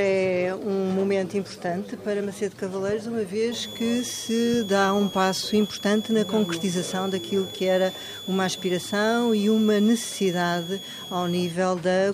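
From 3.52 s to 11.52 s a switching supply whistle sits about 15 dB below the sound: a high tone wandering between 3.32 and 3.48 kHz, from a power supply cycling audibly. Unlike fixed-pitch interference, its pitch drifts.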